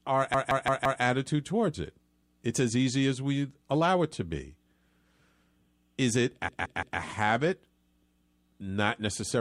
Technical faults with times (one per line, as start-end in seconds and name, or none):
0.34-1.02 repeated buffer
6.49-7.00 repeated buffer